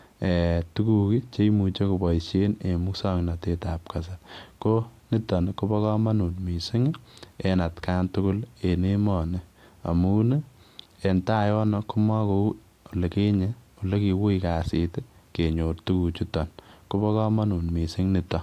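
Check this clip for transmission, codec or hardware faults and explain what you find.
Nothing in the recording points to a transmission, codec or hardware fault. The speech runs without any audible disturbance that would need explaining.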